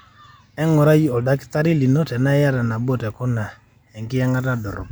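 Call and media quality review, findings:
No faults found in this speech recording; nothing audible to attribute to capture, transport or playback.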